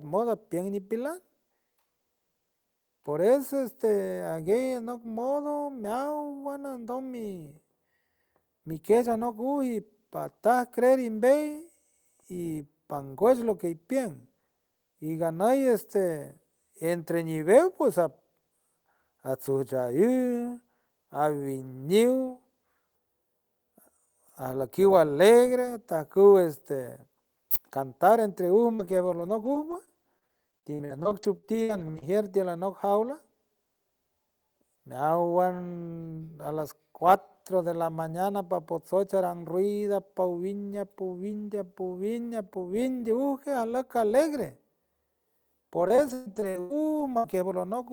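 Speech, with two stretches of repeated packet loss (robotic sound). From 28.75 to 32.04 s there are 19 separate holes, the longest 62 ms, so about 17% of the span is patched by extending the preceding sound. The repetition gives a choppy quality with pieces missing just before "tiül anoc". From 45.88 to 47.34 s there are 7 holes, the longest 121 ms, so about a quarter of the span is concealed. On a spectrogram both stretches show smeared, horizontally stretched harmonics broken by abrupt seams. In the waveform, short repeated cycles replace the natural envelope. At 47.72 s a single 20 ms frame is a lost packet rebuilt from error correction. The next packet carried a low-bitrate copy, so nothing drops out, but that frame sounds briefly rougher and noisier. A spectrogram shows a thin vertical slice with grainier texture, with no break in the waveform.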